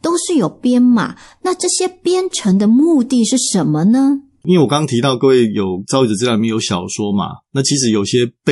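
From start to finish the speech carries a watery, swirling texture, and sibilants break into metallic chirps while consonant attacks smear. This is likely MP3 compression at a low bitrate, which fits something around 48 kbps. Short of bits, the encoder drops weak frequency lines that flicker in and out between frames, and at this level that damage is plainly audible.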